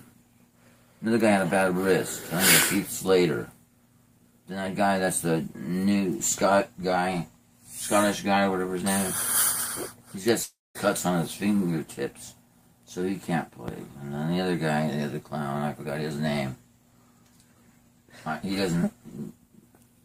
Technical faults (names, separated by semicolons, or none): long network dropout